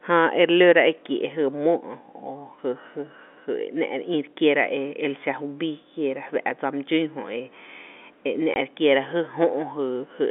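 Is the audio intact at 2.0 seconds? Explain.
Yes, the audio is intact at 2.0 seconds, with the speech carried through the telephone channel's G.711 coding and nothing breaking up or dropping out at that moment.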